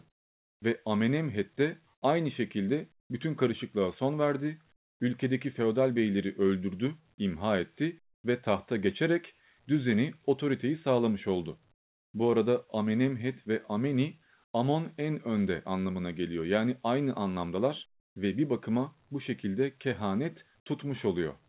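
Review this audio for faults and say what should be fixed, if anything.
Likely discontinuous transmission: the sender went silent in pauses and the receiver substituted comfort noise in place of the background at 0.1–0.62, 1.94–2.02, 3.0–3.1, 4.76–5.0, 11.74–12.14, 14.44–14.54 and 18.0–18.16 s. The real background becomes flat, featureless hiss, about 1 to 20 dB quieter, in narrowband audio with nothing above 4 kHz. Disabling DTX on the sending side, or improving the comfort-noise level match, would keep the background continuous.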